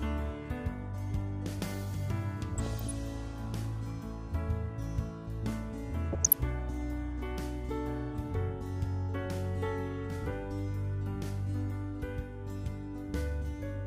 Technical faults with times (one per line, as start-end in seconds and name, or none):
2.56-2.91 DAB burbling
6.13-6.40 DAB burbling